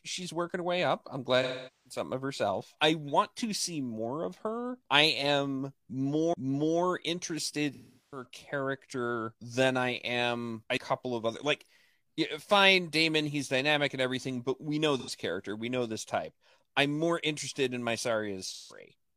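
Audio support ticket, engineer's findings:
AAC frame loss with concealment at 1.42–1.99 s, 7.74–8.25 s (just before "character than I am"), 15.0–15.1 s (between "everything but we know" and "character we know this") and 18.46–18.79 s. The decoder patches gaps from the last good spectrum, so they sound smeared or phasey. The longest fits about ten lost frames.

CD skip at 6.33 s, right after "of her I am", and at 10.77 s. Each is a short mute, around 30 ms and then around 20 ms, before playback resumes from a different spot. A knock or a disc flaw bumped the laser onto another turn of the spiral.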